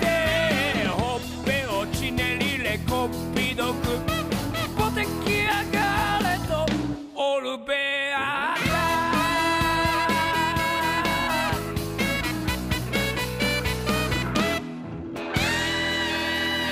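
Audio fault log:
No faults detected.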